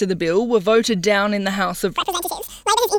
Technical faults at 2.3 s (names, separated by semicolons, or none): audio read two samples at a time (double speed)